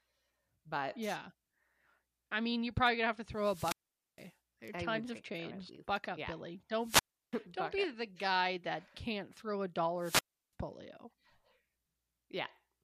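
Speech with wireless microphone squelch dropouts at 3.34–4.33 s (after "probably gonna have to"), 6.80–7.36 s (before "don't be up the") and 9.98–10.53 s (after "that can't throw a"). A fading radio link brings rising hiss before the receiver mutes for about 460, 340 and 340 ms. That hiss sets it apart from a digital packet dropout.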